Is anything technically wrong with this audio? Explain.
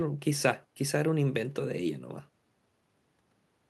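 No, the speech has passed through a working call path, with the top end rolling off around 12 kHz in a way that points to an Opus codec at a fairly generous bitrate, and nothing here counts as a fault.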